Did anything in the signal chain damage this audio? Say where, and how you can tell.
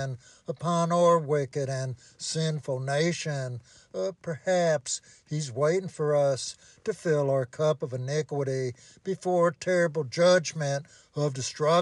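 No, nothing damaged this audio.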